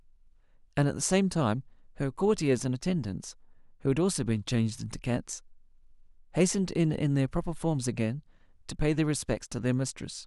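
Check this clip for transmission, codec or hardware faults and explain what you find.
Nothing in the speech signal points to a transmission, codec or hardware fault.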